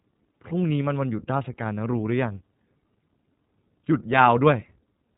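From start to finish the speech carries the iLBC codec, a narrowband VoIP coder. Its excitation is coded afresh every 30 ms frame without borrowing from the previous one, and the result fits about 13.33 kbps. Nothing reaches above 3.8 kHz, so sibilants lose their edge and the sound turns boxy. The coding damage is plainly audible as a rough, slightly synthetic texture laid over otherwise intelligible speech.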